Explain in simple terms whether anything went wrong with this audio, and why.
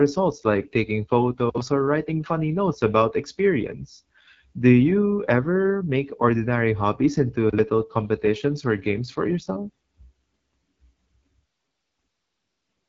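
The whole clip, from start to finish, has gone through the AMR wideband (HD Voice) codec, the kind phones use for calls, and the damage is plainly audible. This speech was squeezed at one of the codec's lowest settings, so it sounds rough and raspy throughout. Nothing above about 7.5 kHz survives, which takes the air and crispness off the top. That's why it sounds like a phone call.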